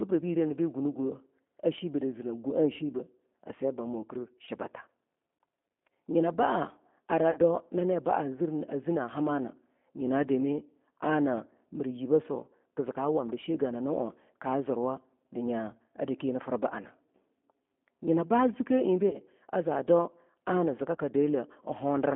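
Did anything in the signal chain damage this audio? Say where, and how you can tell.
Yes. At the codec stage, the whole clip carries G.729 coding at 8 kbit/s: the speech is confined to roughly 200 Hz to 3.5 kHz, with a plainly audible rough, synthetic texture from rebuilding each frame out of a vocal tract filter, pitch predictor and sparse pulses.

On the network, VoIP packet loss concealed by the speech codec shows at 4.45–4.49 s, 7.31–7.39 s, 19.09–19.19 s and 20.96–21.00 s. These are 20 or 40 ms gaps, fitting one or two dropped packets, where the decoder stretches its last pitch and filter into a fading buzzy tone or coloured noise before recovering.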